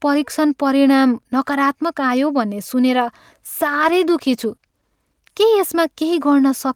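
At 3.68 s a call bitrate drop sets in and lasts until 6.23 s. The speech turns coarse, watery and muffled, with the highs cut away. The worst stretch lasts about 1.2 s. It fits the encoder falling from roughly 48 to 16 kbps.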